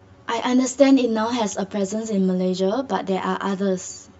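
Throughout, channel delay (comb filtering): one channel lags about 10 ms, leaving hollow, fixed notches from about 50 Hz that never sweep like flanging.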